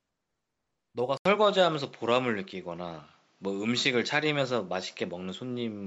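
At 1.17 s there's an 80 ms gap, then the speech turns duller, cut off above 7.6 kHz, with a level shift and faint new background noise. Likely an input switched to a poorer device.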